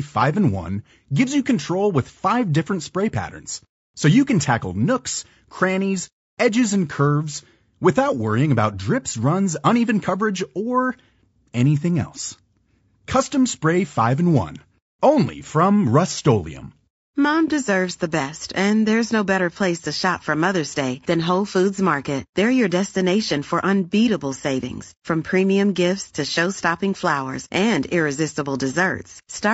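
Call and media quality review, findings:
Low-delay AAC compression, throughout. Speech rough and grainy, noise between pitch harmonics, top band thin and synthetic. Likely AAC-ELD encoder: short frames resolve harmonics poorly and spend more bits, starving detail at a rate that fits about 32 kbps.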